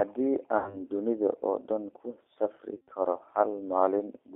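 G.729 codec damage runs throughout. The speech sounds rough and synthetic, which fits an 8 kbit/s rate. Nothing passes above 3.4 kHz. From 0.58 to 0.81 s, VoIP packet loss concealed by the speech codec stretches 80 ms of lost audio into a fading buzzy tone or coloured noise. From 2.74 to 2.91 s, scattered losses return, with the longest gap at 100 ms. The speech turns weak or distorted again.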